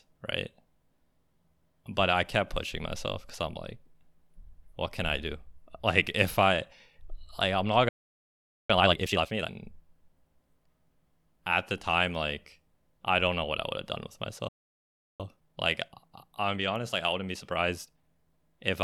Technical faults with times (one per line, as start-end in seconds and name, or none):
7.89-8.70 playback stall
8.70-9.50 time-compressed catch-up
14.48-15.20 playback stall
15.20-18.20 time-compressed catch-up